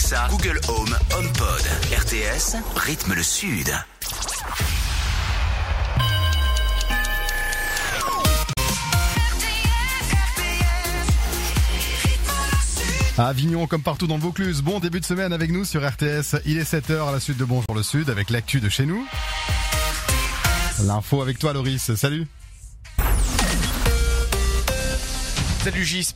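Damaged data in a compressed stream at 8.53–8.58 s, 14.80–14.83 s and 17.66–17.70 s: corrupted frames make the decoder lose sync, producing brief glitches.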